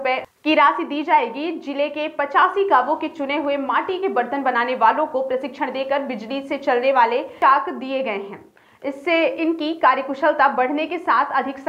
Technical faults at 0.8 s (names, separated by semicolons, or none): none